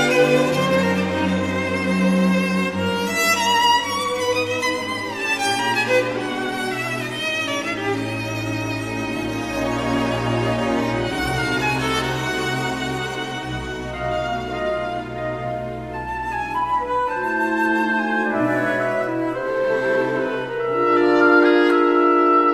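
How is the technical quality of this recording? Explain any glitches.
No technical glitches are audible anywhere in it.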